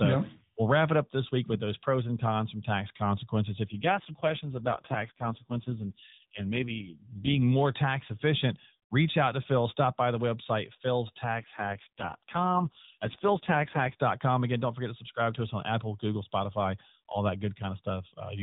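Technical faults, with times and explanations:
3.68–7.41 s and 11.40–14.01 s, AMR rate drop: the mobile link twice pushes the AMR narrowband codec down from its normal rate, spending fewer bits on the speech itself. The first drop starts after "cons from tax consequences" and recovers by "more tax efficient reach". In both stretches the voice turns buzzier, rougher and more synthetic, which fits a fall from 12.2 to 4.75 kbps. The band and timing stay unchanged, with no gaps.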